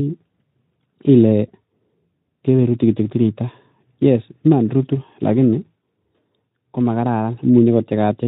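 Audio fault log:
Nothing in this speech stood out on listening.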